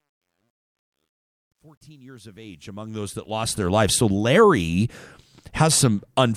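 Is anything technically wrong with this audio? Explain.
Yes. From 0.0 to 3.82 s, truncation distortion on the fade-in: undithered low-resolution quantisation, consistent with about 11 bits, leaves gritty grain, worst before 2.33 s, visible as stair-stepped waveform and broadband spectrogram hash.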